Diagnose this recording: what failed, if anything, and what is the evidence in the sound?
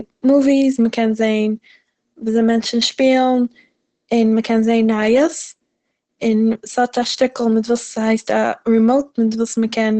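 The codec stage failed: the audio was likely squeezed through Opus compression at a very low rate, around 12 kbps, with the encoder in its SILK speech mode. Throughout the speech, nothing survives above 8.7 kHz, and heavy coding damage leaves it muffled and hoarse.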